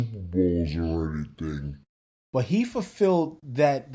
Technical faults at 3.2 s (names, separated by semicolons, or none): none